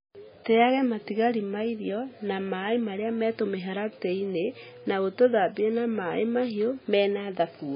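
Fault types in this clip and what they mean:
MP3 compression: The speech has no content above 5 kHz, and the heavy damage gives it a watery, swirling texture as faint frequency components drop in and out from one frame to the next. The cause is likely a very low bitrate MP3 encode, around 16 kbps. A plain low-pass filter would dull the sound just as much but leave it steady, without this shifting, bubbling quality.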